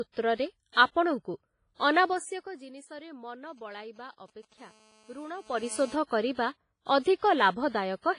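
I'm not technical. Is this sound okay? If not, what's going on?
No, it has several problems. Across the whole clip the speech sounds heavily squashed, with a washy, ringing quality, a hiss that swells and fades with the voice, and nothing in the very top end. That's likely WMA compression at a low quality setting, which throws away detail to save space.

Around 0.72 to 0.77 s there's pre-echo: a short smear of hiss arrives just before a sharp sound starts. The compression spreads its noise over a chunk of time, so some of it leaks in ahead of the attack.

From 2.05 to 2.65 s you can hear zipper noise as the level drops noticeably. It goes down in small jumps, about ten a second, and each jump adds a little tick, so it sounds like a zip. It happens again from 5.38 to 5.72 s, this time as the level rises back up in larger steps.

Between 3.49 and 4.54 s come GSM signalling bursts. An old-style 2G mobile phone nearby is checking in with the network, and the audio gear picks it up as a galloping dit-dit-dit of short buzzes, about 217 pulses a second.

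Then from 4.58 to 5.95 s there's GSM phone buzz, the same phone now in an actual call. It sends out a steady, raspy buzz at that same 217-per-second rate that has nothing to do with the speech and sits underneath it the whole time.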